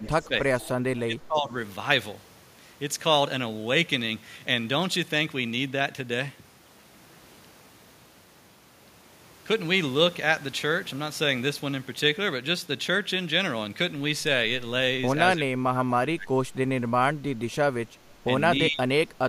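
Right at the start, 0.0–0.32 s, then 0.58–0.65, 0.94–1.54, 15.38–16.33 and 18.69–19.12 s, the speech dips or drops out, by up to about 30 dB. That's likely speech suppressed in double talk, with the canceller ducking everything while both sides overlap. Overlapping that, at 0.06–0.28 and 0.6–0.69 s, there's a faint copy about 25 dB down and roughly 300 ms late, likely echo leak from a speakerphone's canceller letting some through.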